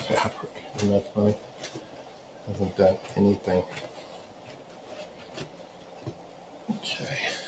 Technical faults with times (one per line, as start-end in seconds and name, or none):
0.00-7.47 noise suppressor applied to music or sounds